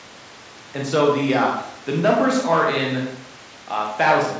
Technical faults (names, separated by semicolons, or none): none